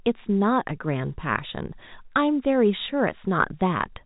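No faults: the speech carries the narrow band of G.711 telephone coding, with nothing above 3.8 kHz, and no defect intrudes anywhere in the clip.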